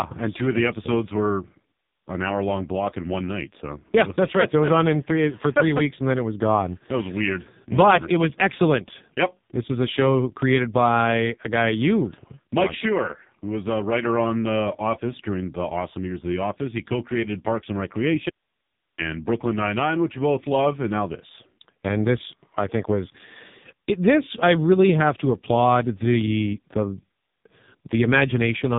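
Throughout the speech, the AMR narrowband mobile codec limits the band to nothing above 3.8 kHz, and heavy coding damage leaves the voice buzzy and synthetic. The pulse-driven vocal-tract model sounds starved of bits, which fits AMR-NB's low 5.15 kbps mode.

From 18.30 to 18.98 s, an audio dropout to a faint residue cuts the speech for about 0.68 s. Only hiss remains, roughly 50 dB below the signal. The likely cause is the source feed being lost while the downstream path stayed live.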